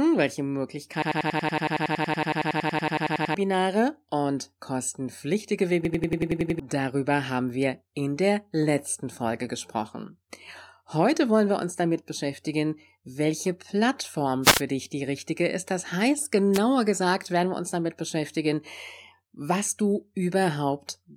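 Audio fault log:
1.02–3.34 s and 5.85–6.60 s, system hang loop: The system stalled while the output kept replaying one 93 ms buffer, which fits a 4096-sample buffer, so the sound stutters at about 10.8 Hz. About 2 s and 0.7 s of speech are lost.
14.42–14.62 s and 16.53–16.59 s, wireless microphone noise hit: The FM radio link faded as reflected signals cancelled, letting receiver noise rise over the speech. Each fade comes through as a brief swish of static, about 0.2 s and then 0.06 s long.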